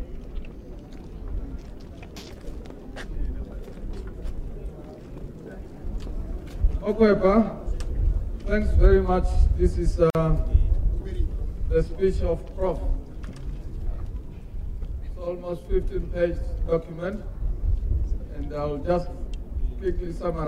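At 10.10 s the sound drops out for about 48 ms, until 10.15 s. This is a gap at a join of encoded pieces. Two separately encoded sections were butted together untrimmed. The encoder's start delay and end padding remain. The edges are smeared, and the sound resumes where it stopped.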